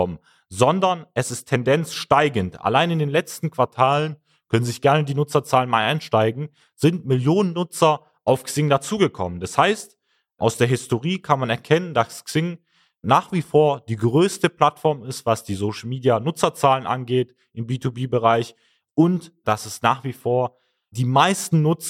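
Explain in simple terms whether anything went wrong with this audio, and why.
From 3.64 to 4.79 s, the speech suddenly slows by 5.75 percent and drops in pitch by about one semitone. Then it snaps back. This is likely a drift correction step. Software matching two clocks briefly changed playback speed to balance its buffer.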